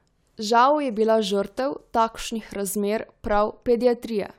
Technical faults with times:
none

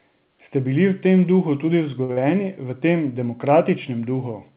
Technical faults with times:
2.04-2.11 short stall from a late packet
2.13-2.19 short concealed packet loss

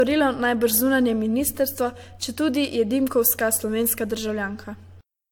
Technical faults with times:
0.00-5.31 generation loss

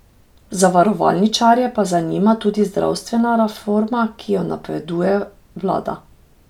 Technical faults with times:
none

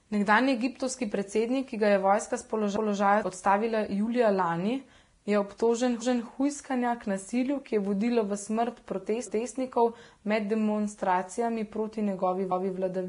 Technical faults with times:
0.00-13.09 transcoding between lossy codecs

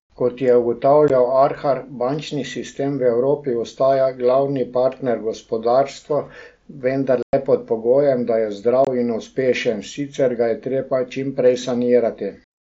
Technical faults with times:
1.08 unconcealed Bluetooth headset packet loss
7.23-7.33 unconcealed Bluetooth headset packet loss
8.85-8.87 unconcealed Bluetooth headset packet loss

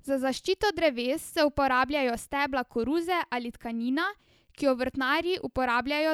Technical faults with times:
none

